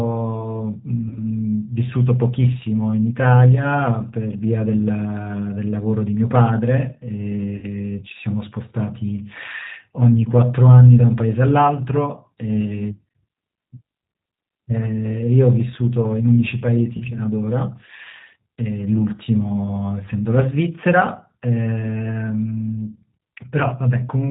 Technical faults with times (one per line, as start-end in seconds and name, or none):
0.00-24.31 G.729 codec
1.08-1.19 VoIP packet loss concealed by the speech codec
7.57-7.71 VoIP packet loss concealed by the speech codec
16.97-17.02 VoIP packet loss concealed by the speech codec